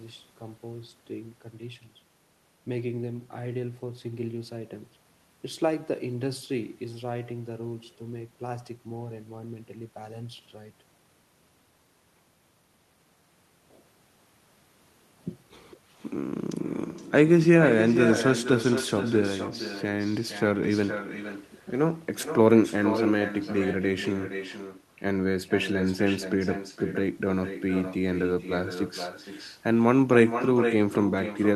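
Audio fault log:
Throughout: echo with no canceller. Every phrase returns about half a second later as a weaker copy, about 10 dB below the speech. It sounds thin. The far end's loudspeaker feeds its microphone, and nothing strips that return path.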